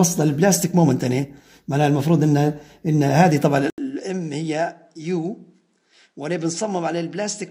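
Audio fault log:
3.7–7.5 s input switched to a poorer device: after a gap of about 80 ms the sound becomes duller and about 10 dB quieter, with nothing above 10.5 kHz and a faint new background noise roughly 45 dB below the signal. The likely cause is that the recording moved to a different microphone or headset path. A plain filter or gain change would not bring a silent gap or a new noise floor at the same moment, as this switch does.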